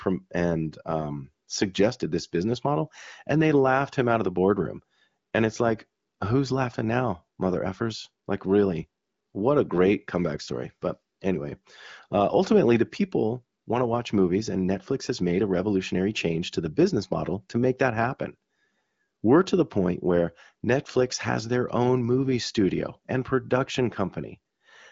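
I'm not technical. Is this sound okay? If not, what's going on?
Yes, this one's fine: it's speech carried over an HD Voice phone call, so it sounds like a good phone line with the very highest sizzle trimmed off, and nothing in it has gone wrong.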